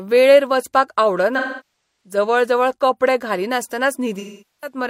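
AAC frame loss with concealment hits at 1.37–2.16 s and 4.19–4.77 s: the decoder patches lost frames from the last good spectrum, leaving smeared, noisy, phasey stretches.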